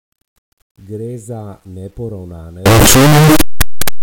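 From 2.66 s to the end at 4.03 s, the 8-bit samples were likely read with signed and unsigned mixed up, flipping each sample's top bit. Every zero crossing of the speech becomes a full-range jump, so the audio turns into loud, harsh distortion, with quiet moments as loud as the rest.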